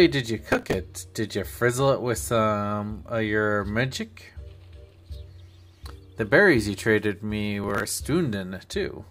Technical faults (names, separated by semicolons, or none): processor overload crackle